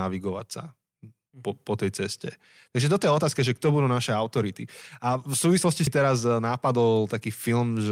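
Speech playing from a CD, with one CD skip at 5.87 s, between "v súvislosti" and "teraz eh". A brief mute of a few milliseconds and a tick mark the point where the pickup laser lost its track, probably after a knock or a disc flaw, and landed on another turn of the spiral. Playback then resumes from a different spot, so the speech jumps discontinuously by a whole number of disc revolutions instead of continuing where it left off.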